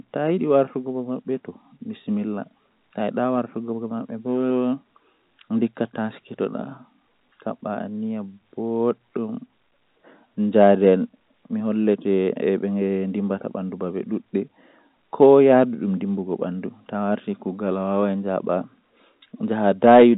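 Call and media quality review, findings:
No faults found in the speech. The G.711 telephone coding path is audible only as a band limit with nothing above 3.8 kHz and a faint coding trace at most, which fits 64 kbps A-law.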